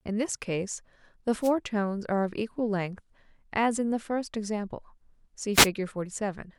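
At 1.41 to 1.52 s and again at 5.53 to 5.68 s, a wireless microphone noise hit: the FM radio link fades as reflections cancel, receiver noise swells, and a brief static swish is heard. Each shows as a broadband vertical smear on a spectrogram and a hissy thickening of the waveform.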